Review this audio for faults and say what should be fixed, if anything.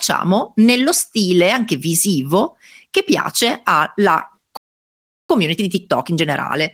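Playback stall, 4.57 to 5.30 s: the speech cuts off in mid-flow and the output stays silent for about 0.72 s before resuming. A gap like this, with nothing fading in or out, is likely the player running dry of buffered data or having its audio thread held up, so it had nothing to send to the output until data arrived again. Giving the playback buffer more headroom and running the audio thread at a higher priority would prevent it.

Time-compressed catch-up, 5.30 s to the end of the clip: right after the stall the speech comes out hurried, at about 1.1 times normal speed, while its pitch stays where it was. The player is working off the backlog from the stall by dropping short slices of audio and cross-fading across the joins. This catch-up would not be needed if the stall were prevented, and a gentler speed-up spread over a longer stretch would make it less noticeable.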